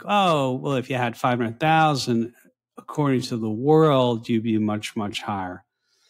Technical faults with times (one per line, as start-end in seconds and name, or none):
1.39-6.10 time-stretched section